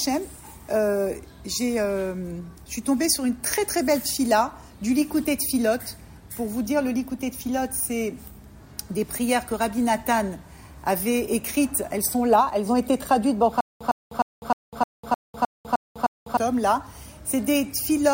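From 13.61 to 16.37 s, a stutter with silent gaps: a 107 ms fragment repeats nine times, separated by 200 ms of digital silence, likely a stalled playback buffer.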